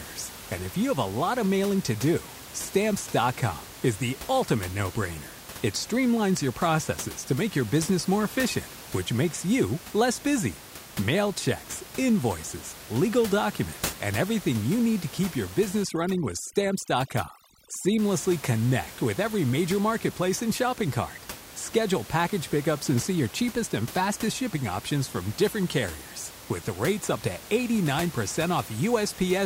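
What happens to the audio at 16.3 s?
At 16.3 s the clip is inside a stretch of overdone noise removal running from 15.83 to 17.99 s, between "need to keep your" and "connect with every major". The room noise sits about 16 dB below the speech, and the noise reducer is set too aggressively. It pushes individual frequency bands down or out whenever they come close to its noise estimate, taking quiet parts of the speech with them. The background collapses into twinkling, warbling specks.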